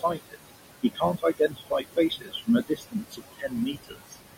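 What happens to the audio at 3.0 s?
The noise suppressor mistook part of the speech for noise between 2.67 and 3.54 s, turning it down by as much as about 20 dB, so for roughly half a second soft sounds come out swallowed and faint. The same suppressor is also pulling the room noise down by about 20 dB throughout, so the noise sinks between the words and rises under them.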